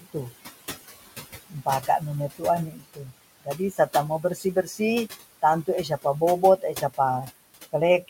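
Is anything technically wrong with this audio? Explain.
Yes, the noise suppressor is causing two related problems. It treats the room noise, which sits about 14 dB below the speech, as something to remove, and it removes it unevenly.

Noise suppressor artifacts run through the whole clip. The suppressor estimates the steady background in each frequency band and pulls those bands down by about 17 dB, recalculating frame by frame. Between words the background sinks, and under the speech it climbs back.

Speech cut by the noise suppressor occurs three times: 2.71 to 3.12 s, 3.41 to 4.8 s, and 6.42 to 6.99 s. In each span the suppressor misreads quieter parts of the speech as background and turns them down along with it, by about 19 dB, about 20 dB and about 11 dB. That affects about a third of a second in the first span, about half a second in the second, and only brief moments in the third. 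Soft consonants, word endings or a quiet phrase there sound swallowed or faint.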